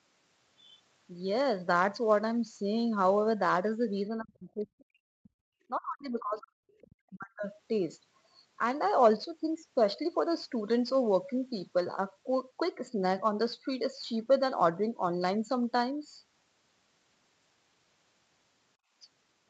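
From 4.18 to 5.03 s the talker gets pushed down hard, dropping by about 40 dB in places. That's speech suppressed in double talk, most likely because the echo canceller couldn't tell the talker from the far end playing at the same moment. It hits again at 5.19 to 5.39 s, 5.69 to 6.62 s and 6.80 to 7.45 s, with the talker dipping each time.

In among those stretches, at 4.79 s and again at 6.69 s, there are tiny scraps of the other side's voice leaking through. They're faint, roughly 35 to 40 dB under the talker, and last only a few hundredths of a second. Those are likely bits of loudspeaker echo the canceller didn't fully remove.

At 18.77 to 18.94 s the room tone ducks by about 20 dB and comes right back. That's the background gated by the echo canceller, which clamped the mic for a moment while the loudspeaker was active and then released it.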